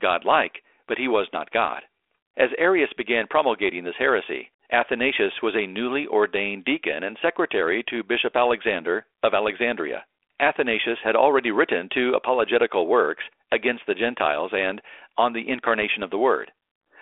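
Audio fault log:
No fault is present; the speech passes through G.726 ADPCM at 32 kbit/s, confined to a telephone band of about 300 Hz to 3.5 kHz with only the light coding texture expected at that rate.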